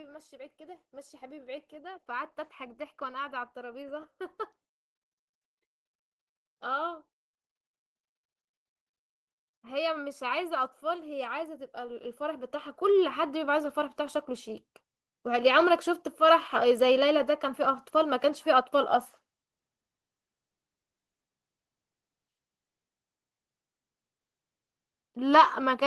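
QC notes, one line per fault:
0.29–4.12 s and 9.62–14.27 s: automatic gain rising. The gain control judged the input too quiet and lifted its gain gradually, about 7 dB over the first stretch and about 10 dB over the second, so speech and background noise swell together.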